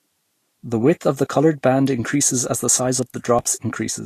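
From the start, the speech has a hissy, grainy treble and softened consonant attacks, with nothing above 14.2 kHz. This is likely Vorbis compression at a bitrate around 38 kbps. Coarsely quantised high bands replace fine detail with noise-like energy. A spectrogram shows a hard ceiling at 14.2 kHz and speckled upper bands.

At 1.87 s, between "of the coloured band" and "increases as the size", a sharp snap sits on top of the speech, likely an electrical switching spike from a nearby switch or discharge. The waveform shows a near-vertical spike, and the spectrogram a thin full-height stripe.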